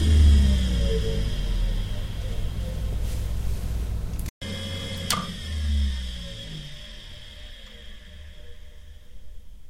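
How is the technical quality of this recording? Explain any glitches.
The recording has one fault, crude rate conversion, present throughout. Samples were dropped without filtering, which fits a 48 kHz to 44.1 kHz change, leaving an inharmonic fizz roughly 30 dB below the audio that tracks loud, bright sounds.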